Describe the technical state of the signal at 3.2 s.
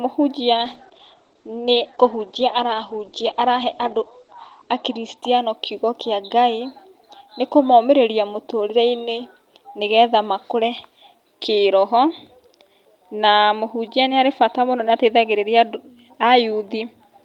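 At 3.2 s you're right in the middle of a call bitrate drop that runs from about 0.55 s to 5.23 s, ending just before "kiugo kĩa". The bandwidth estimate sagged, so the encoder went from 32 kbps down to 11 kbps and narrowed its audio band from 20 kHz to 8 kHz. The speech sounds coarse, watery and dull on top, with the low rate holding for about 4.2 s before things recover.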